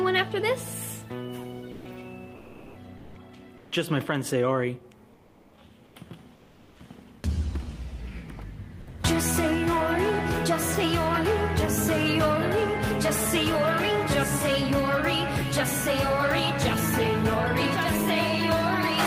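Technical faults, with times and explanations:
1.71–1.83 s and 8.83–8.87 s: sound dropped by the voice detector. About 120 ms and 20 ms of sound vanish under steady noise, likely because a detector mistook it for background and stopped sending.
2.35–2.75 s, 2.99–3.15 s, 3.59–3.71 s, 5.15–5.51 s, 5.87–5.95 s, 6.35–6.75 s: comfort noise in place of the background. The detailed background becomes flat, featureless noise about 1 to 3 dB quieter, likely from discontinuous transmission synthesising fill.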